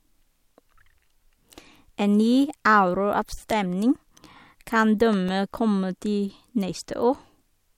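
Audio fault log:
4.68–5.59 s, CD scratch ticks: seven short, regular ticks in the speech, the longest only about 2 ms long and coming roughly seven times a second. A surface scratch wiped out more data than error correction could recover on each disc rotation, so the player patched or muted those samples.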